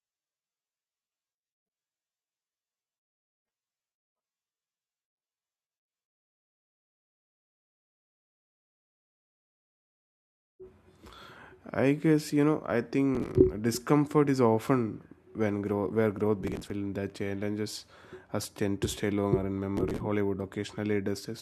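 Around 13.15 to 13.35 s, 16.43 to 16.70 s and 19.77 to 20.00 s there's processor overload crackle. The machine keeps missing its deadlines for buffers of around 5 ms and skips them outright, so dozens of hard-edged gaps pile up into a gritty tearing over the speech.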